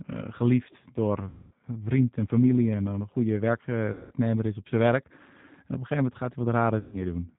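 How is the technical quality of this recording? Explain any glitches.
The recording's quality is poor: narrowband codec colouring runs throughout, and three brief dropouts have been papered over.

A G.729 codec, which fits the 8 kbit/s G.729A variant, rebuilds the speech from a filter-and-pulse model. It sounds rough and synthetic, and a spectrogram is empty above 4 kHz.

VoIP packet loss concealed by the speech codec occurs at 1.29–1.52 s (before "vriend en familie en"), 3.93–4.14 s (before "is op zijn werk") and 6.79–6.98 s (after "een gegeven moment gaat"). The decoder stretches its last pitch and filter while lowering the gain, producing a buzzy tone or coloured noise that fades. This shows as flat, frozen harmonic lines on the spectrogram and a shrinking waveform envelope.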